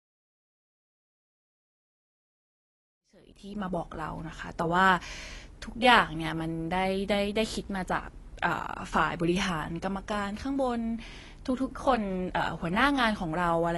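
AAC compression runs through the whole speech clip. Nothing sounds above 11.5 kHz, and the plainly audible codec damage shows as dull, smeared sibilants with a fizzy edge. This is likely low-bitrate AAC-LC discarding high bands and coarsely quantising the rest, which fits about 32 kbps. The gentle fade-in reaching full level at 4.11 s carries the same dullness.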